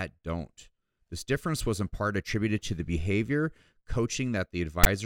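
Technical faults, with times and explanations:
4.84 to 4.86 s, file tags played as audio: near the end of the clip, a text tag block is decoded as samples, giving a brief harsh rasp and then dead silence from its zero padding. On the waveform this is a hard-edged block with a DC offset, then a flat line. On the spectrogram it is a broadband vertical smear with a blank gap after it.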